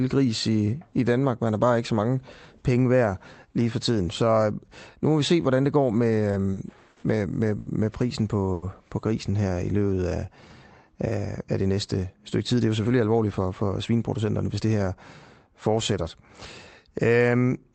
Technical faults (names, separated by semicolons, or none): short stall from a late packet; jitter buffer slow-down; jitter buffer speed-up